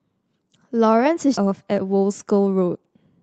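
A speech clip passing through a WebRTC call path, where the Opus coding leaves its usual coding noise and a top end that stops near 8 kHz, which fits a bitrate around 24 kbps. At 1.37 to 1.39 s there is a skip ahead: playback jumps forward with no fill, dropping roughly 0.7 s of speech. The two sides are butted together almost directly, so the speech lurches abruptly to later material. That stretch was dropped, either on the way or by the jitter buffer when it overflowed, while later audio was already waiting. Immediately afterward, from 1.47 to 2.83 s, a jitter buffer speed-up follows. The receiver repeatedly removes short pitch-period slices, about a fifth of a second in total, and this runs the speech at 113% of normal rate with unchanged pitch. The passage sounds noticeably hurried while the buffer drains back toward its target delay.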